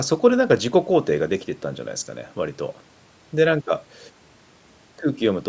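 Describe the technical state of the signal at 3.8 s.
At 3.8 s the speech signal is intact, with no dropout, clipping, or other fault, only the expected band limit of call microphone processing, which leaves nothing above 8 kHz.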